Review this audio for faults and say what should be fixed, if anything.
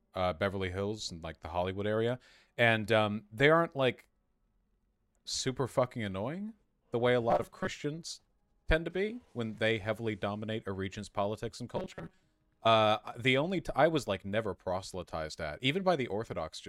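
Robotic sound from repeated short buffers at 7.30–7.68 s and 11.77–12.23 s: a rigid, metallic 188 Hz buzz, likely from roughly 5 ms of audio being replayed when new data arrived late. Keep the incoming audio ahead of playback, for example with a larger jitter buffer, so no gaps need filling.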